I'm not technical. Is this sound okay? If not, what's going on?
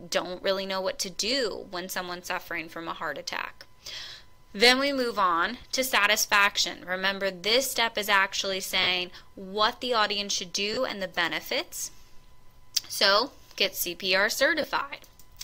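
No. There are four tiny dropouts, at about 5.61 to 5.63 s, 8.83 to 8.87 s, 10.74 to 10.77 s and 14.62 to 14.64 s. Each is a brief rough, hissy smear lasting 20 to 40 thousandths of a second. These are lost LE Audio frames. Some chunks of sound never arrived over the Bluetooth link, so the receiver filled each hole by repeating the last sound it had, scrambled, which blurs into noise.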